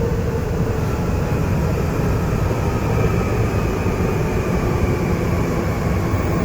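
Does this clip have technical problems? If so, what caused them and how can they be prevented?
Yes. From 1.31 s to the end, the sound abruptly turns grainier with no gap. That is an adaptive stream at a lower bitrate, consistent with a drop from about 64 to 24 kbit/s, unlike a rebuffering stall. Preventing it requires a steadier connection or a fixed higher-bitrate stream.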